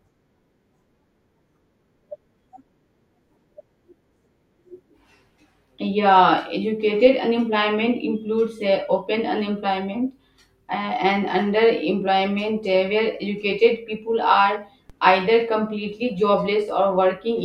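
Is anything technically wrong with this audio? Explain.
Yes. At 7.06 s and again at 14.90 s the speech carries a DC step: the waveform's zero line jumps by about −31 dBFS and then drains away through a roughly 20 Hz high-pass. Each step lands as a brief low thump while the speech continues unchanged.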